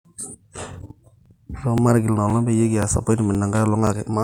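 Overlapping chunks: the speech was handled in half-second blocks, each starting about 23 ms before the previous one ended, so that sliver plays twice. You get a regular little stutter at 0.21, 0.73, 1.26, 1.78, 2.30, 2.83, 3.35 and 3.87 s.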